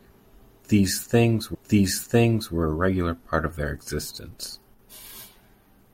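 From 1.54 s to 2.54 s, just before "a regular part of", a stream segment is repeated: about 1.0 s of speech plays a second time after the player queued the same chunk twice. You hear the speech jump back and restate itself, with a small blip at the seam. On a waveform the two stretches match shape for shape, and a spectrogram shows an identical block of harmonics and formant patterns twice, split by a thin vertical click line.

Right after "part of their existence", from 4.74 s to 4.79 s, the level falls by about 6 dB for roughly 50 ms, most likely because one channel drops out. Everything shared by the two channels is then carried by a single side in the mono sum. It sounds like a brief dip or flutter in loudness. The waveform envelope shows a short, squared-off step down and back, and the spectrogram shows a narrow band of uniformly dimmer energy across all frequencies.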